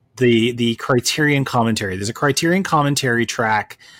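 No technical faults are audible.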